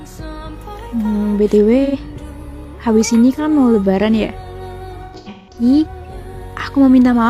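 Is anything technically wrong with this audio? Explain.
Yes, there is AAC frame loss with concealment at 1.84 s (about 85 ms, consistent with two lost frames) and from 5.05 to 5.62 s, where losses scatter across half a second with the longest run around 150 ms. The decoder patches each gap from the last good spectrum, leaving brief smeared, noisy patches that appear as blurred, flattened blocks on a spectrogram.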